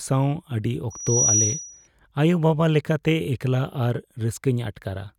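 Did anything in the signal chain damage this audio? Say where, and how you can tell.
Yes. Loudspeaker feedback squeal appears in the analogue acoustic path from 0.90 to 1.88 s: a 5.8 kHz tone swells over roughly a third of a second to sit about 5 dB above the speech. The microphone picked up its own loudspeaker, and loop gain exceeded unity at that frequency.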